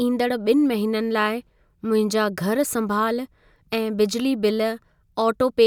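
No technical faults are audible anywhere in the speech recording.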